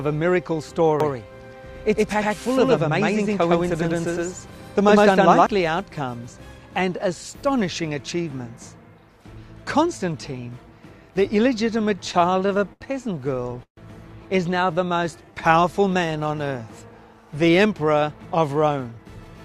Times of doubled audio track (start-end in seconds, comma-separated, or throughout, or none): 1.00-5.46